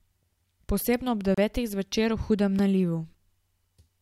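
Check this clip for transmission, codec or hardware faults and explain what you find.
Two blocks of digital silence. The first runs from 1.34 to 1.38 s, a 32 ms hole just before "zvečer v hudem"; the second is a 3.6 ms drop at 2.59 s, just after "zvečer v hudem". In each, the output was replaced by zeros, probably because the buffer wasn't filled in time. The signal cuts out and returns with no fade. The longer gap sounds like a brief hole in the speech, the shorter one like a tick.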